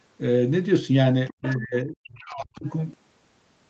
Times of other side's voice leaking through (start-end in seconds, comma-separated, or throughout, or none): 1.27-1.56, 2.66-2.70